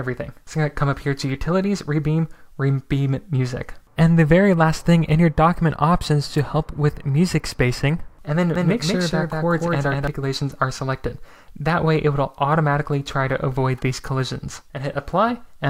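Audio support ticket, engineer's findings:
Doubled audio track, 8.56 to 10.08 s: second full-band copy about 200 ms behind at roughly equal level, no room tail, starts and stops abruptly. Likely a slower duplicate capture path mixed in.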